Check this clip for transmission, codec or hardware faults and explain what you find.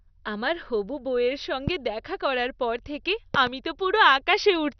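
Two kinds of fault are present: a dull, gurgling coding distortion across the whole speech clip, and loud pops at two moments.

Throughout, the speech sounds muffled and granular, with a gurgling, granular distortion. Nothing is heard above 6.1 kHz. This is heavy damage that likely comes from MP2 compression at a low rate, probably around 48 kbps. The encoder divides the spectrum into 32 sub-bands and, short of bits, switches the upper ones off entirely, which causes the dullness. It codes the remaining bands coarsely and lets bands flicker on and off, which produces the gurgling texture.

A single sharp pop sits on top of the speech from 1.68 to 1.70 s, and a quick double pop follows between 3.35 and 3.49 s. Each peaks about 15 dB above the speech, which continues unbroken beneath them. These are loud pops, likely caused by a sudden voltage step or spike, such as a connector, switch, static discharge or driver glitch, entering the signal path. 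The circuitry after it shapes the spike into an audible thump.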